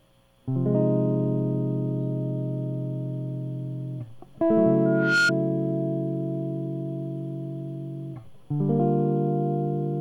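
Loudspeaker feedback squeal, 4.85 to 5.32 s: the microphone picks up its own loudspeaker, so a 1.4 kHz tone swells within a third of a second above the music.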